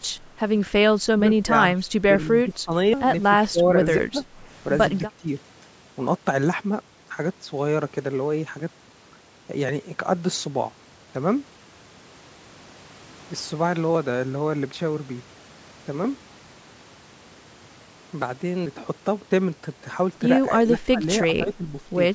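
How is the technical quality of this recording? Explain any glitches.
Not great. The speech keeps ducking during two busy stretches, and there's one skip, all on call audio that tops out around 8 kHz.

Speech suppressed in double talk, at 1.11–1.52, 1.76–1.85, 2.24–2.73, 3.37–3.69, 4.0–4.25, 4.99–5.27, 20.49–21.05 and 21.44–21.66 s: the voice dips about 10 to 20 dB. This is likely the echo canceller clamping down while both ends talked at once.

Audio missing between chunks, at 2.93 s: a short piece of speech just vanishes and the two sides butt together, likely dropped at a handover between processing blocks.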